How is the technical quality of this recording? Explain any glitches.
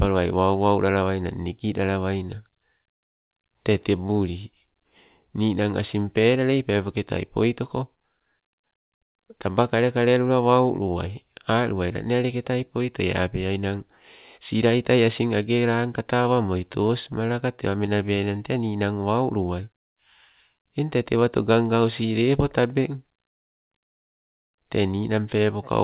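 The recording is narrowband telephone-quality speech: nothing is present above 4 kHz, which points to a G.711-style call codec. It contains three distinct timing glitches.

From 16.1 to 17.89 s there are scattered short gaps: around ten lost or late packets, each patched by extending the preceding sound. The longest patch is roughly 15 ms, and together they cover about a tenth of a second. They come through as brief ticks and tiny smears. Unlike buffer stretching, the overall pace stays the same, because each repair is isolated rather than repeated back to back.

From 18.06 to 18.39 s comes a jitter buffer slow-down. The receiver rebuilt its reserve by repeating single pitch periods many times in a row, adding 49 ms and running that stretch at 88% speed. The speech drags briefly while the pitch stays put. That steady pitch separates it from a tape-style slowdown, and the continuous drawn-out quality separates it from the isolated ticks of packet concealment.

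From 20.58 to 21.17 s there is a jitter buffer speed-up. Holding more audio than it needed, the receiver cut short pieces of pitch periods over and over, removing roughly 40 ms so that passage plays at 106%. The result is a briefly hurried delivery with the pitch unchanged. The compression of time identifies it: nothing is lost audibly as a gap or tick, and the words simply arrive quicker.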